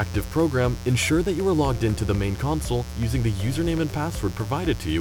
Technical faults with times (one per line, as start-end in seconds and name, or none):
0.00-5.00 mains buzz